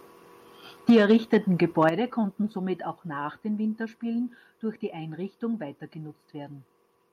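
From 0.89 to 1.37 s the speech shows microphone overload, with peaks pushed about 5 dB past full scale so that a small but noticeable share of samples is flattened. The cause is likely an input level set too high for the converter. It sounds like a harsh, crackly edge on the loudest syllables. On a waveform the peaks appear as flat-topped plateaus, and a spectrogram shows broadband smearing above the harmonics.

At 0.90 s the microphone volume is stepped down by 3 dB, likely the call software reacting to the clipping. The speech and its background drop together in one abrupt step, visible on the waveform as a sudden narrowing of the envelope.

A second, shorter overload runs from 1.82 to 1.89 s, about 2 dB over, again likely from excessive input gain, and a few flattened peaks add a brief crackle. At 1.89 s, just before "konnten somit", the level is stepped down again, this time by 7 dB, likely the same automatic correction. 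It causes a clear, sudden loss of loudness and a marked drop in waveform height from that point.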